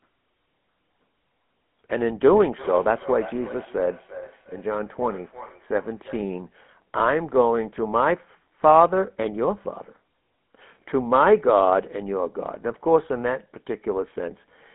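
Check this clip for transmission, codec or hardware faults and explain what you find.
One fault runs through the whole clip.

GSM full-rate codec, throughout. The codec models the vocal tract and rebuilds its excitation from sparse, regularly spaced pulses, which fits a 13 kbps stream. The speech sits in a 200 Hz to 3.4 kHz band, with nothing above 3.8 kHz, and carries a plainly audible buzzy, gravelly roughness.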